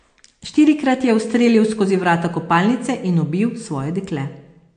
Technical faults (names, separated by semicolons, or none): MP3 compression